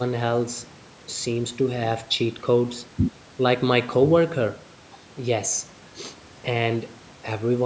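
Nothing stood out on listening; the speech carries only the usual trimming of call microphone processing, with no content above 8 kHz.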